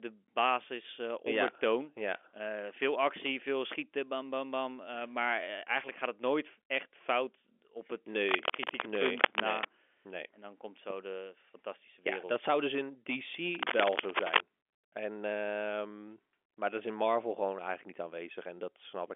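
Right after "echt fout op het", from 8.27 to 9.65 s, a burst of cable scratch noise rasps over the speech at roughly its level. It returns after "dat zou dus in", 13.55 to 14.41 s, a bit louder. That's likely a worn connector being jostled, over telephone-band audio.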